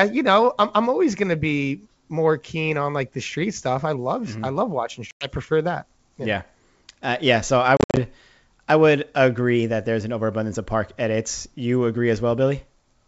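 Packet loss on an ADPCM call opens a 100 ms hole after "I love watching" at 5.11 s, then scattered gaps totalling 150 ms over 200 ms after "yeah so I" from 7.77 s. Each appears as a flat-line waveform and a blank spectrogram column. The decoder's predictor has fallen out of step, so the speech returns slightly distorted before settling.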